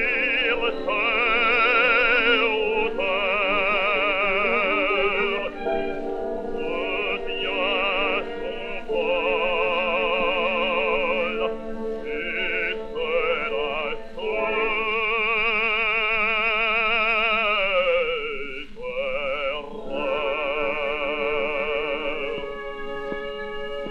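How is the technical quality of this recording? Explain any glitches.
No glitches are audible: no dropouts, clicks, level jumps or timing breaks anywhere in the recording.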